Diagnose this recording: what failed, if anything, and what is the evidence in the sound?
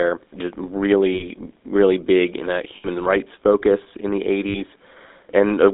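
Buzzy, gravelly roughness runs through the whole speech clip, with nothing below about 250 Hz or above 3.7 kHz. That points to the codec stage, specifically the GSM full-rate codec, whose character fits its 13 kbps mode. The codec models the vocal tract as a filter and excites it with a sparse, regularly spaced pulse train built from a decimated residual. That coarse excitation produces the grainy buzz, and the narrow line band removes the lows and the upper speech range.

Three short stretches take on a rough, metallic ring in place of clean speech. The first runs from 1.14 to 1.26 s, ending just before "really big in a". The second runs from 2.76 to 2.88 s, between "really big in a" and "rights focus in the". The third runs from 4.48 to 4.57 s, just after "rights focus in the". These are lost GSM frames, a network-stage fault. For each missing stretch the decoder reused the last good frame's parameters. 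The held ring lasts 60 to 80 ms, which fits three or four lost 20 ms frames.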